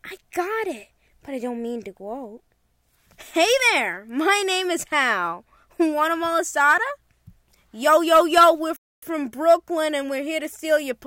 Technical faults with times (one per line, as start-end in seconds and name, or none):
8.76-9.02 playback stall